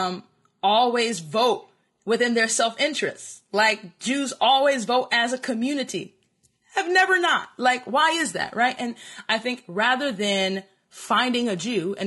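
Speech, with low-delay AAC compression damage running the whole way through. The voice sounds rough and grainy. Noise fills the gaps between harmonics. The likely cause is AAC-ELD, whose short frames resolve pitch poorly. The damage fits a bitrate around 32 kbps.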